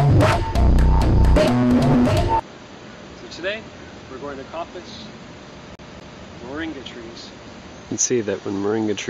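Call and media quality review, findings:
Fast, even stutter from 5.75 s to 6.24 s: the same 245 ms slice of sound plays twice in a row, with a brief mute at each jump. Fault: CD stuck on one turn. Probable component: disc read path. A scratch makes the laser skip back one track at the same point on each rotation, so playback loops the 245 ms segment until the pickup gets past the damage.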